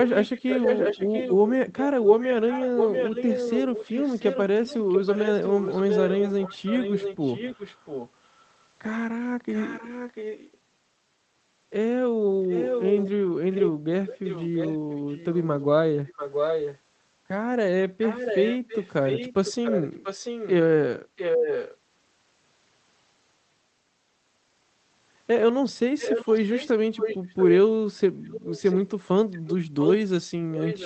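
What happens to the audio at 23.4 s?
Nothing goes wrong at 23.4 s: the speech continues cleanly through that moment, with no dropout, glitch or distortion beyond the ordinary character of the call codec carrying it.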